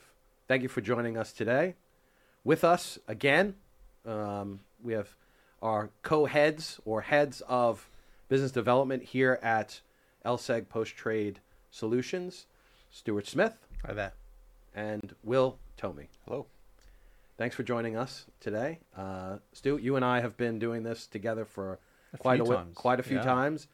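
Separately encoded pieces were joined untrimmed at 15.01 s, leaving a gap at a join of encoded pieces: a 29 ms gap with smeared edges, so the silent part is shorter, before the sound resumes.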